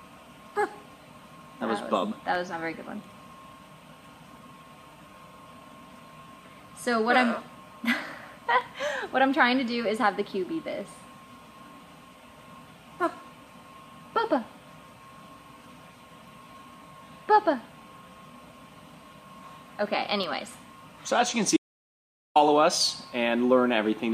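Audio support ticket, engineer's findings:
Dropped samples: single sharp clicks at 2.35, 8.61, 10.81, 20.24 and 23.09 s. Each is a thin vertical line on the spectrogram, no missing content. Likely the capture or processing chain skipping a fraction of a millisecond of samples, so the waveform jumps straight to a later value. Probably buffer handling upstream. Worth checking for overruns around those marks.

Audio dropout to silence: hard cut from 21.57 to 22.36 s, about 0.79 s of silence. No room tone, sound just stops and restarts mid-flow, and whatever was there is gone. Likely the input lost for a moment (loose device, link hiccup or stray mute) while the recorder kept writing silence. Check the connection and device logs near that time.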